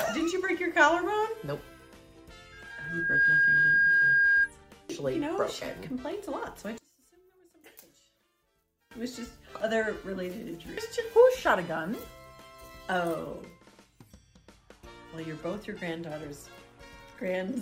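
From 2.52 to 4.50 s, loudspeaker feedback squeal: the microphone is re-capturing its own loudspeaker, and at 1.6 kHz the loop gain passes unity. That single tone swells over a bit under a second into a piercing whistle about 10 dB above the program.

From 6.78 to 8.91 s, the level falls by about 22 dB and the sound turns faint. The likely cause is one channel inverted, so the common centre content cancels in a mono sum and only the faint inter-channel difference remains.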